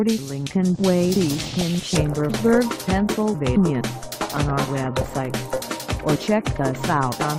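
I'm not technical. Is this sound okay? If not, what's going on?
No. MP2 compression, throughout: the sound is dull, with a gritty, gurgling roughness, most likely from squeezing the audio into a small digital format that splits it into frequency slices and shuts off the upper ones when space runs short.

DAB burbling, from 1.56 to 2.55 s and again from 4.16 to 5.17 s: a burbling, blipping disturbance over the sound. Weak reception lets a small share of errors slip into the data, so individual slices get short blips of noise, worse the second time.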